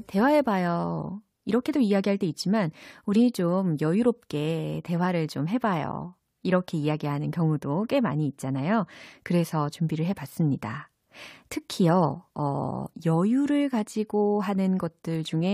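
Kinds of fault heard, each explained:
Compressed frames skipped: at 3.15 s the speech lurches forward with a short, smeared blip instead of a sharp click, and a sliver of sound, some 50 ms, simply never plays. The jump points to whole frames of the compressed stream, about 23.2 ms each, going missing or being rejected by the decoder as damaged. A gap of this size fits roughly two lost frames. Because adjacent frames overlap, the seam is softened into that brief blur.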